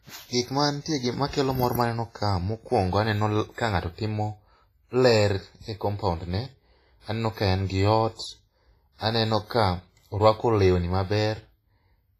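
Heavy transform coding, likely WMA compression at a low bitrate around 24 kbps, smears quantisation noise across long blocks throughout, leaving ringing, washy speech with breathing hiss and nothing above 15.3 kHz. Pre-echo appears from 3.54 to 3.58 s, after "maneno ka mokwongo aneno" and before "ka ng'ato timo", and again from 8.15 to 8.19 s, after "aneno ka en gi". In both, coding noise sized for a sharp attack spreads back into the quiet just before it, giving a hiss of about 35 ms and then 40 ms and a softened onset.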